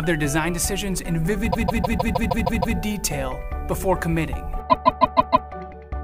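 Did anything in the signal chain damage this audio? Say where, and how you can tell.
Yes. Repeated frames at 1.50 to 2.76 s and 4.69 to 5.47 s: a 156.7 ms block replays eight extra times, then five, stuttering. Compressed data was stored or sent repeatedly, fitting a six-frame run, adding 1.25 s and 0.78 s.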